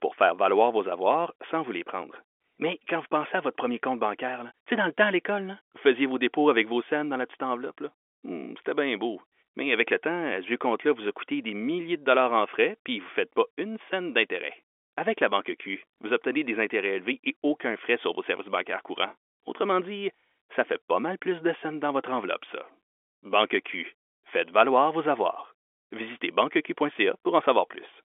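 Nothing goes wrong anywhere in the recording; it's ordinary G.711 telephone speech, carried over a 64 kbps mu-law line with the usual narrow phone band that stops a bit short of 4 kHz.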